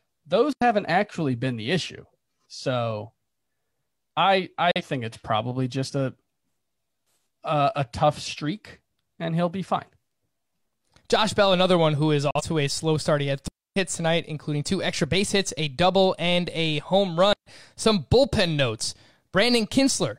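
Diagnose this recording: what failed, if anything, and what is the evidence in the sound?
Digital wireless dropout, at the radio link between transmitter and receiver. The speech falls into clean near-silence three times: 0.53 to 0.62 s (89 ms) just before "actually been the issue", 13.48 to 13.76 s (284 ms) just before "tonight including two extra", and 17.33 to 17.46 s (135 ms) right after "double and a home". The receiver lost too much data and muted with a very short fade, leaving no noise burst either side. The uneven hole lengths separate these from the frame-sized broadcast gaps.

Digital broadcast dropout, at the codec or transport stage of a broadcast chain. Two identical holes occur at 4.71 to 4.82 s and 12.31 to 12.41 s, each removing about 43 ms of audio behind a fast 3 ms fade. That fixed duration fits exactly one lost codec frame that failed its checksum, which the decoder muted until good frames resumed. 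The repeatable frame-length size distinguishes these from the wireless mutes, whose lengths vary with how long the link stayed down.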